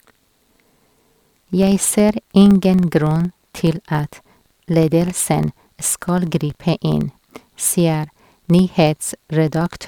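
Across the whole speech clip, a filter restarted on every block loses its stored state at each block boundary and starts again from silence. Each restart leaves a small transient, so a ticking buzz at about 21.5 Hz runs under the speech, which fits a 2048-sample block.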